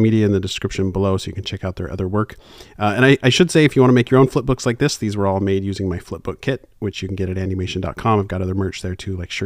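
No technical faults can be heard anywhere in the recording; the signal stays intact and steady throughout.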